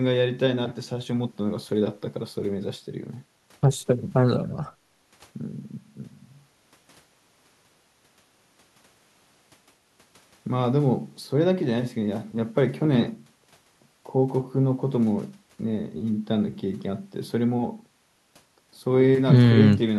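Nothing in this recording stands out as a technical fault at any point, so there's nothing to flag here.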